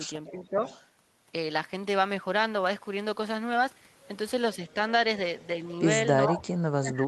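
Echo leak at 0.27–0.48 s and again at 0.64–0.85 s, 5.40–5.44 s and 6.32–6.41 s: a copy of the speech returns 435 ms late, about 20 dB down at first, about 30 dB down at 5.40 s and only about 10 dB down at 6.32 s. This is likely a far-end echo canceller letting part of its loudspeaker pickup back into the call. Speech suppressed in double talk overlaps it at 0.31–0.62 s, where the speech dips by up to about 10 dB for roughly 300 ms. It returns from 6.26 s to the end, where the speech is cut by as much as about 35 dB. Likely the canceller, unable to separate talker from echo, turned both down.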